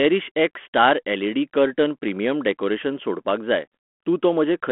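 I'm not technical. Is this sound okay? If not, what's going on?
Yes, this speech sounds fine, with nothing going wrong anywhere in it, just the slightly narrow, phone-like quality you'd expect from an ordinary cordless or landline call.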